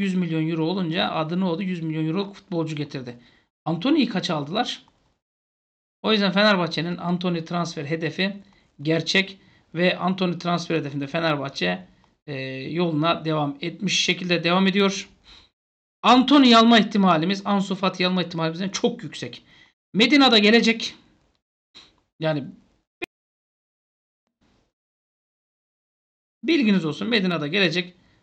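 Faint, regular ticks run through nearly the whole audio, from 0.13 s to 28.12 s, coming roughly every 0.15 s, around 200 of them in all. These are clock slip clicks. The likely cause is two devices running on separate, unsynchronised clocks that differ by something like 150 ppm, so a single sample gets dropped or repeated each time that drift adds up to a full sample.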